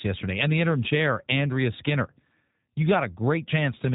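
Throughout, G.729 codec damage: speech rebuilt from a filter and sparse pulses sounds rough and synthetic, fitting roughly 8 kbit/s, with a spectrogram empty above 3.8 kHz.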